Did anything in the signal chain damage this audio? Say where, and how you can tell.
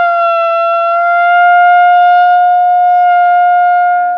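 Yes. At the codec stage, from 0.88 s to 3.80 s, the treble dulls and a gritty noise rises, then clears. This is a Bluetooth SBC bit pool drop: a congested link forced fewer bits, starving the top sub-bands and coarsening quantisation. The sound points to a bit pool falling from 31 to about 13, near 94 kbps.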